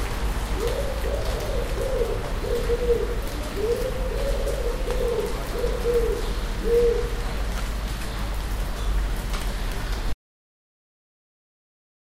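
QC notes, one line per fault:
10.13 s to end: audio dropout to silence. The sound cuts off mid-flow and never returns. From 10.13 s onward there is pure silence, with no room tone or background left. That points to the input being lost while writing continued. A disconnected device, a failed link or a stray mute is the likely cause. Whatever sound occurred in the last 2.05 s is gone and cannot be recovered from this file.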